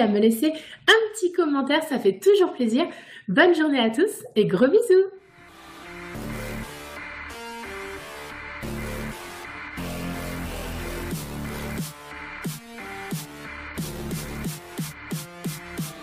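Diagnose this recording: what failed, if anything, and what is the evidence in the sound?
The codec stage failed: compressed frames were skipped at 6.24 s. The audio jumps forward by roughly 200 ms, about seven frames of 23.2 ms each. The skipped frames remove audio rather than inserting anything, unlike a buffer underrun's silent gap.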